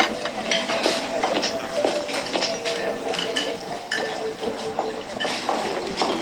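Nothing here calls for comment, since the sound carries on without any technical trouble you can hear.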